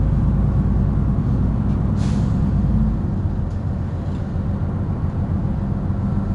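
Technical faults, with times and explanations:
throughout 4-bit ADPCM compression: plainly audible gritty hiss rides every loud sound, and nothing above 10.6 kHz survives. Each sample is stored as a coarse 4-bit step, at a rate that fits about 89 kbps.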